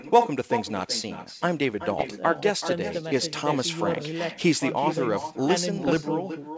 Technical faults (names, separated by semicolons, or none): echo with no canceller; bit errors on an ADPCM link